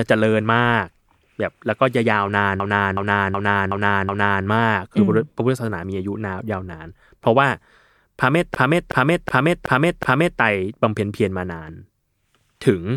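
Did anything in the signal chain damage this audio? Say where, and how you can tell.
Yes. From 2.60 to 4.46 s and from 8.55 to 10.40 s, the speech stutters as one 0.37 s fragment repeats exactly five times at 2.69 Hz. This is a system hang loop at the driver/buffer stage. The system froze while the hardware kept replaying its ring buffer, consistent with a 16384-sample buffer.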